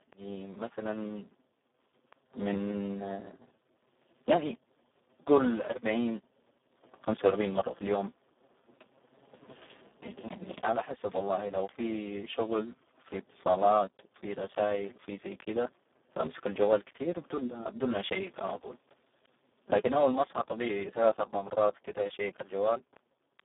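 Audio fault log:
throughout: Speex codec. The speech is hoarse, grainy and close to robotic, with a buzzy, vocoder-like edge. This sounds like heavy damage from CELP coding at the bottom of Speex's range, which fits a bitrate near 4 kbps. At that setting too few bits are left to model the excitation signal. The band runs from about 200 Hz to 3.6 kHz, and nothing is present above 3.8 kHz, giving a narrow, telephone-like tone with no upper air at all.
0.13 s to 23.40 s: word clock ticks. A steady train of sharp clicks runs through the clip at about one every 0.15 s, roughly 150 in total, and they vary in strength from one to the next. The pattern points to a digital link read by a receiver on its own free-running clock, off from the sender by something like 150 ppm. Each time the two clocks slip a full sample, one sample is dropped or repeated, and that leaves a tiny discontinuity in the waveform that is heard as a tick.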